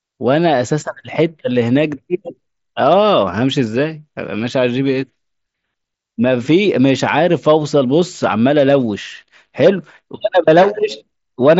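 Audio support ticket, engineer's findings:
No faults found.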